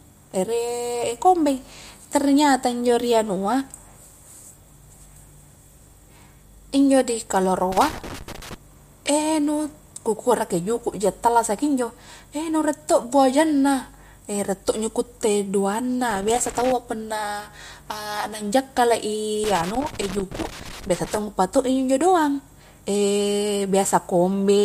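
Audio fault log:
7.72–8.54 s, 16.11–16.72 s and 19.44–21.18 s: loose connector crackle. Three irregular bursts of crackle and scratching cut across the speech, lasting about 0.8 s, 0.6 s and 1.7 s, the last being the longest. A worn or dirty contact in the signal path is making and breaking contact rapidly as it shifts. Each break chops the signal into fragments, and the abrupt on-off edges are heard as crackle rather than clean dropouts.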